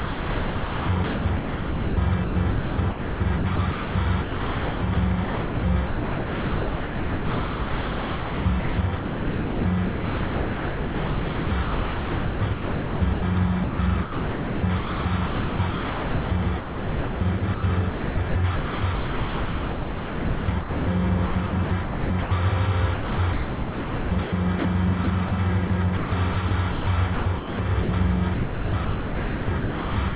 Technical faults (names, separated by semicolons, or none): sound chopped by the voice detector